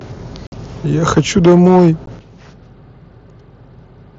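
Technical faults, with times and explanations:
0.47–0.52 s and 2.06 s, unconcealed Bluetooth headset packet loss: the sound drops out abruptly for 52.5 ms, then for 15 ms, which fits about seven and about two lost headset frames. Nothing fills the holes. The waveform goes flat between hard edges, and the spectrogram shows blank vertical stripes.
1.17–1.89 s, microphone overload: the loudest peaks are driven about 6 dB past the converter's limit, likely because the input volume is set too high. Roughly a tenth of the samples are flattened, so the waveform shows squared-off tops and the spectrogram shows broadband splatter above the harmonics, heard as a harsh crackle.
1.19 s and 2.19 s, microphone volume stepped down: the level falls in single sudden steps, about 2 dB and then about 9 dB, likely the call software reacting to the distorted peaks. The waveform envelope shrinks at once, and the whole spectrogram, including the background, turns abruptly paler.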